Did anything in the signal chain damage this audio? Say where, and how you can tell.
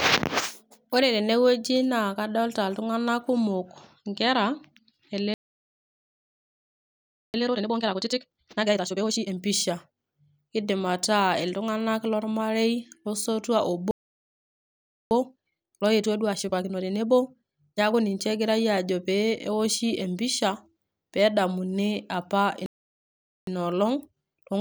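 Yes, at the playback stage. Playback stalls cut the speech dead at 5.34 s for 2.0 s, at 13.91 s after "iltung'anak lormarei losotua" for 1.2 s, and at 22.66 s for 0.81 s. The waveform drops to a flat line and the spectrogram shows blank columns. The player likely ran out of data or had its thread blocked.

Each stall is followed by time-compressed catch-up: 7.34–9.34 s at 2× speed, 15.11–18.11 s at 1.25×, and from 23.47 s, after "pedamuni apa", to the end at 1.15×. Pitch holds, so spectrogram harmonics stay level while syllables crowd together. Small cross-faded cuts shorten the backlog.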